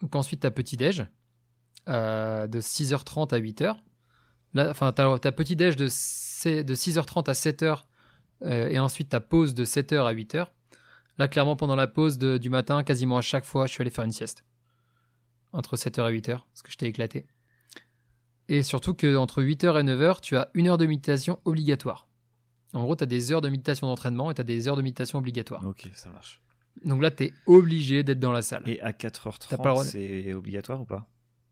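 No technical faults are audible anywhere in the recording.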